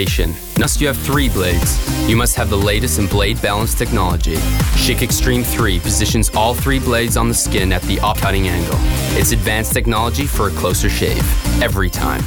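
At 0.64 s, and again at 8.15 s, there is damaged data in a compressed stream. Bytes in the coded stream were corrupted. The decoder misread those frames, lost sync and hunted for the next valid header. Each event is a brief chirp, squawk, click or short hole.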